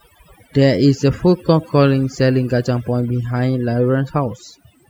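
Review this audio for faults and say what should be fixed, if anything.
Overdone noise removal runs through the whole clip: a noise reduction stage was set far too aggressively, so any frequency band sitting close to its noise estimate gets pulled right down or switched off. The quieter parts of the speech fall under that threshold and vanish along with the noise, leaving near-silent gaps dotted with twinkling specks. Set the reduction amount lower and check the result by ear before committing it.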